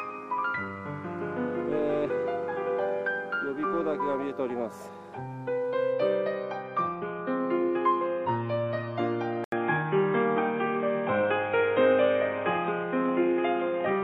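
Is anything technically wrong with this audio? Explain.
Yes. An input switched to a poorer device, from 9.44 s to the end. At that point an 80 ms gap opens and the sound turns dull and boxy, with nothing above 3.8 kHz. The level shifts by a few decibels and a different, faint background noise appears, well below the signal. The cause is likely the system changing its input mid-recording to a microphone or headset link that passes a narrower band and has its own tone and noise.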